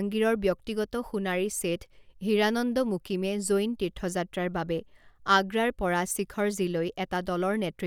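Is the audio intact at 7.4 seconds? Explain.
Yes, the speech at 7.4 seconds is intact, with no audible dropout, click, distortion or other technical fault at that moment.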